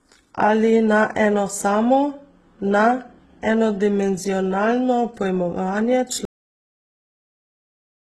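Transcoding between lossy codecs runs from the start of this speech. Nothing is present above 12.2 kHz, and two different kinds of coding artefact overlap. That pattern likely comes from a low-bitrate HE-AAC encode re-encoded through Opus, with the second codec spending its bits on the first codec's damage.

A cut-off end comes at 6.25 s. The final buffers were never written, so the speech breaks off mid-sound and falls straight to digital silence with no decay. That dead silence lasts until the clip ends at about 8 s.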